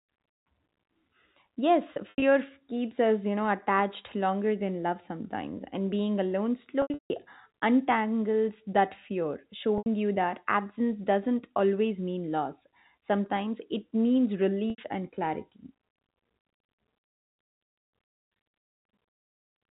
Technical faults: packet loss with pitch repetition

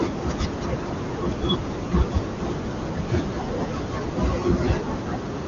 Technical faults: none

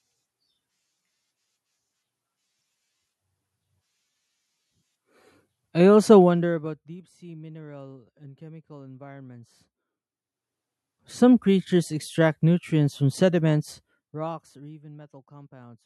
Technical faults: zipper noise

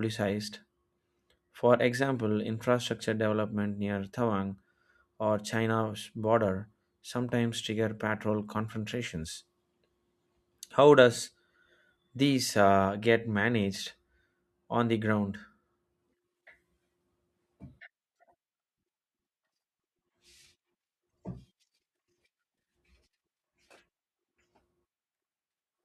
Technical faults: none

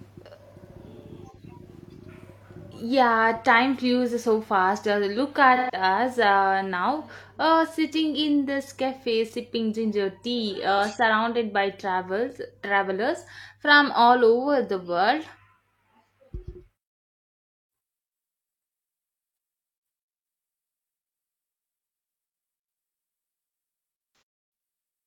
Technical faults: AAC frame loss with concealment

